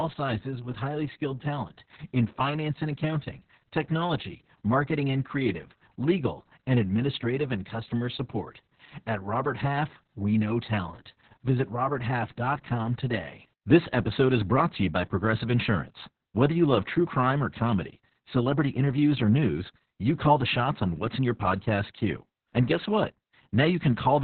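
From start to finish the speech carries heavy Opus voice compression. Nothing is present above about 4.3 kHz, so the sound is narrowband and muffled, with sibilants dulled. The SILK linear-prediction coder is rebuilding the excitation coarsely, which gives the voice a hoarse, slightly robotic grain. That degree of damage points to a very low bitrate, around 6 kbps, and long coding frames of roughly 60 ms.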